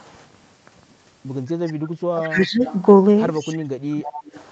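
From 1.66 to 1.89 s a delayed copy of the other side's voice trails in about 171 ms late, sitting roughly 30 dB under the speech. This is an echo leak: the far side's echo canceller likely let part of its loudspeaker pickup through and sent it back.

From 2.13 to 2.64 s the speech dips by up to about 20 dB. Inside that stretch, from 2.23 to 2.48 s, the same 171 ms echo returns at about 20 dB below the speech. This is speech suppressed in double talk: with both sides active at once, the echo canceller likely could not tell its own talker from the loudspeaker echo and turned both down.

From 2.65 to 2.82 s the echo leak comes back at the same delay and level.

From 3.5 to 4.01 s the speech drops by up to about 30 dB, and the same suppression repeats.

From 4.03 to 4.44 s the 171 ms echo returns at about 20 dB down.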